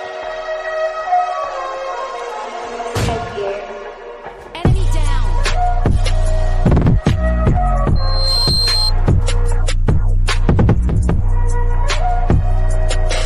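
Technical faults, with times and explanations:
7.95–8.92 s, loudspeaker feedback squeal: a pure tone near 4.2 kHz swells over roughly 0.4 s until it is about as loud as the surrounding sound. The microphone is re-amplifying its own loudspeaker, and loop gain above unity at that frequency lets the tone grow until the amplifier limits it or the loop is broken.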